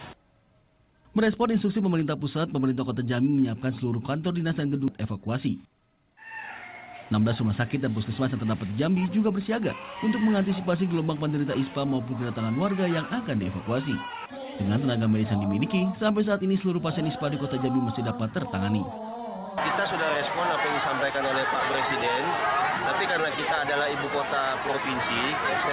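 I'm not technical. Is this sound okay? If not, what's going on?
No. At 4.88 s there is a skip ahead: about three quarters of a second of sound is simply missing, and playback jumps forward with no silent gap, unlike a dropout, which leaves a hole.

Right after, from 4.98 to 6.11 s and again from 7.13 to 9.04 s, a jitter buffer speed-up makes the sound run about 10% and then 8% faster. The pitch stays the same, so it sounds hurried rather than higher, unlike a tape running fast.

The whole clip also has a muffled, phone-like tone because the call path carries nothing above 4 kHz.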